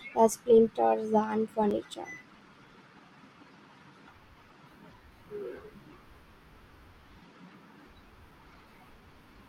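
From 1.0 to 2.65 s and again from 8.08 to 9.02 s, the speech carries CD scratch ticks. A surface blemish defeats error correction every rotation. It leaves brief clicks about five times a second.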